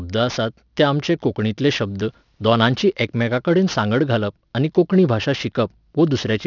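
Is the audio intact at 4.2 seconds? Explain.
No, there's aliasing at 4.2 s, and it runs through the whole clip. The sound points to a rate drop to about 12 kHz without filtering, so anything above 6 kHz folds back down, leaving sibilants gritty and metallic with junk roughly 20 dB under the speech.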